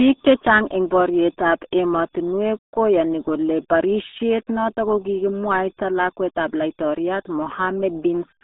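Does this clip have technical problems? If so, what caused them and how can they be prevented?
Yes. The whole recording has the RealAudio 14.4 codec sound running start to finish. Everything is squeezed into roughly a telephone band, about 200 Hz to 3.7 kHz, with nothing at all above 3.8 kHz, so the speech comes across muffled and gargly. The codec damage is heavy: the coder rebuilds the voice from a coarse model rather than the actual waveform, which fits an 8 kbit/s dial-up-era stream. To prevent it, go back to an original or archive source and encode with a modern codec at a sensible bitrate.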